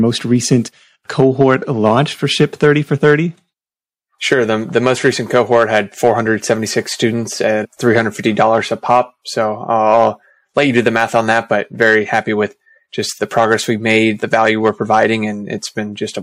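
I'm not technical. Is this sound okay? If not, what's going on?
No. The sound has hard clipping throughout: the loudest moments were too big for the recording to hold, so their tops got sliced flat. You hear brief crackles only on those peaks, not a constant hiss or steady fuzz, because only a tiny fraction of the sound crosses the limit.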